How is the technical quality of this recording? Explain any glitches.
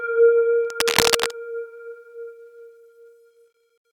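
The recording has one clear glitch. From 0.65 to 1.33 s there is cable scratch noise. A worn cable or connector was likely moved. Its shifting contact adds dense, uneven scratching, about as loud as the sound itself.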